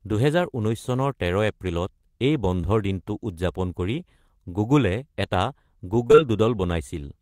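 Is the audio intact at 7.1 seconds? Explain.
Yes, at 7.1 seconds the speech is intact, with no dropout, click, distortion or other fault audible at that moment.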